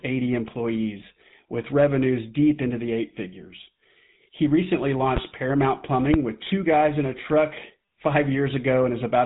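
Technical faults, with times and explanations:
throughout GSM full-rate codec: the speech has a constant buzzy, gravelly roughness, and nothing above 3.8 kHz gets through. The codec rebuilds the voice from a vocal-tract model driven by evenly spaced pulses and keeps only every third excitation sample, so fine detail turns to grit. The damage is plainly audible, which fits a 13 kbps coder. Plain telephone band-limiting would dull the top end just as much but leave the voice smooth; here the grain gives it away.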